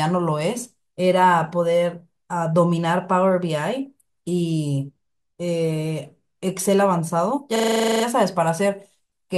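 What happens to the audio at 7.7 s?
At 7.7 s the system has stalled in a system hang loop, running from 7.56 to 8.04 s. While the computer or driver is frozen, the sound hardware keeps replaying the same 40 ms stretch of its ring buffer, twelve times over. Repeating at 25 Hz, the fragment comes out as a rapid, rough stutter bordering on a buzz, and the speech stops moving forward until playback resumes, with essentially nothing skipped afterwards.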